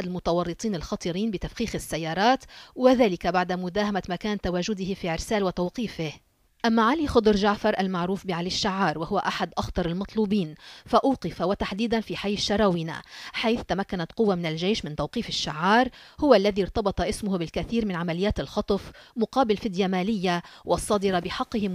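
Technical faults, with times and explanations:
No technical faults can be heard anywhere in the audio, and the signal shows nothing that calls for attention.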